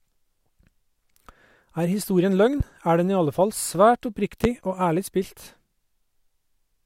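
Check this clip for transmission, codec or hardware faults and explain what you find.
Two loud pops interrupt the speech, at 2.60–2.63 s and 4.44–4.47 s, peaking about 10 dB and then about 15 dB above it. Each is a single sharp thump from a sudden voltage pulse, likely a switch, static or driver glitch, shaped by downstream circuitry. Unlike a dropout, the speech continues uninterrupted underneath.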